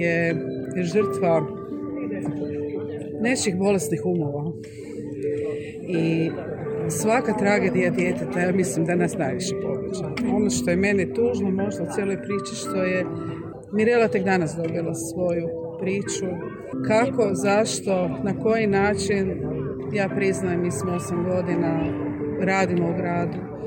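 Nothing is technically wrong with the audio in this clip.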